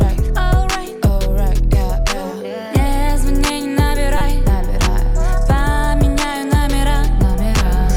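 At 4.18 s, running to 4.21 s, a single corrupt frame decoded produces a brief burst. Damaged bits in one compressed frame were decoded anyway, so misread gains and codes placed energy at the wrong frequencies for just that frame. Unlike a dropout or concealed packet loss, the sound does not smear. Instead, a burst appears and vanishes within about 30 ms.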